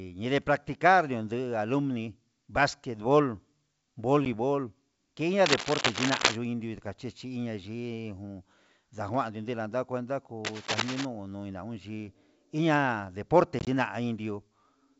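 At 4.25 s there's a quick bit of packet loss on what sounds like an ADPCM call: about 10 ms drops to silence, roughly one packet's worth. The hole has a hard edge, and because the decoder's predictor and step size lose sync with the sender's, the speech comes back with a touch of distortion before settling. The audio itself is G.722 wideband coding, with only faint coding damage.

From 5.45 to 6.36 s there's a burst of cable scratch noise, dense and uneven rustling at about the same level as the speech. It's likely a worn cable or connector being moved, with its contact resistance jumping around. A second, shorter patch runs from 10.45 to 11.05 s, a bit quieter at about 5 dB under the speech, with the same scratchy texture.

The packet loss comes back worse from 13.59 to 13.68 s. About 50 ms goes missing, scattered across 80 ms in several small gaps, the longest of them 20 ms. That's a handful of packets. 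You hear a stuttering run of dropouts, and after each one the speech returns with some grit while the decoder finds its footing again.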